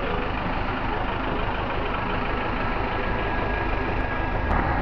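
At 3.2 s, compressed frames were skipped by the decoder, so roughly a tenth of a second of sound drops out, consistent with about five frames. Hard clipping follows as peaks exceed what the stage can pass: a single flattened peak at 4.01 s right at the limit with no overdrive, then about 3 dB of overdrive from 4.51 to 4.59 s, heard as crackle on the peaks.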